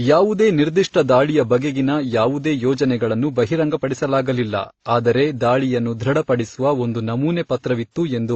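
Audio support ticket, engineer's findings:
Throughout: speech hard-limited at 8 kHz, layered mixed codec artefacts, likely transcoding between lossy codecs, fitting an AAC-WMA-Opus chain. Spectrogram: empty band above 8 kHz.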